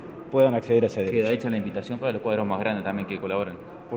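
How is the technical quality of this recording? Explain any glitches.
The recording has one steady fault that runs from start to end. It is a resampler restarted on every block. The audio appears to have been converted to a higher rate, and the doubling fits a 24 kHz to 48 kHz step. Each 100 ms block was converted in isolation. At each block edge the converter lacked the true neighbouring samples, so a small error lands there. The result is a faint tick ten times a second, present only while sound is playing.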